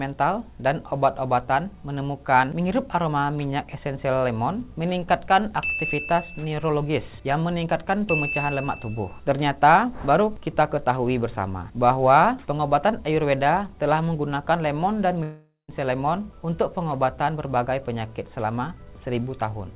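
From 15.23 to 15.71 s the sound breaks off: the last fragment is stretched into a fading buzz, then about 160 ms of near-silence, and roughly 450 ms never returns. This is likely a long network dropout, heard through a path band-limited at 4 kHz, consistent with G.711 mu-law.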